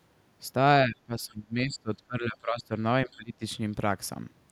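From 0.86 to 2.73 s, the speech is pulled down in pieces. It drops by about 25 dB at its deepest, for about a second and a half in total. It sounds choppy and dull. This is speech suppressed in double talk. The likely cause is an echo canceller hearing both sides at once. It could not tell the talker from its own loudspeaker echo, so it turned everything down. The same dips return from 3.06 to 3.43 s.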